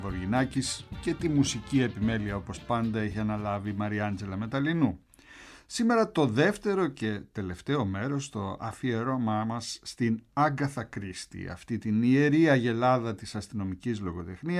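No technical faults can be heard anywhere in the recording. Nothing breaks up, drops out or distorts at any point.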